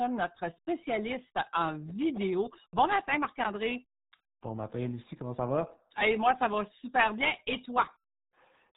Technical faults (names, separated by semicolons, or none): RealAudio 14.4 codec